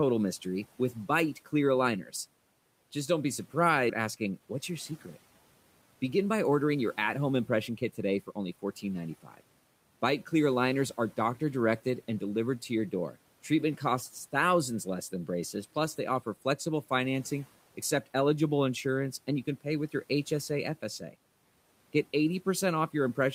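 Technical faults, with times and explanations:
3.89 to 3.91 s, skip ahead: Playback jumps forward with no gap and no fill. About a second of speech is gone. A backlog of late audio was discarded so playback could catch up. The two sides of the cut are joined almost directly, so the speech lurches abruptly.
3.99 to 8.66 s, jitter buffer speed-up: The speech runs about 7% fast at its normal pitch, and it sounds hurried. The buffer still held too much audio after the jump. It trimmed short pitch-period pieces again and again, removing roughly 0.4 s in total.
9.23 to 9.41 s, speech cut by the noise suppressor: A brief piece of speech drops by up to about 11 dB, and it sounds swallowed. The suppressor mistook it for background and turned it down along with the room noise, which otherwise sits about 26 dB below the speech.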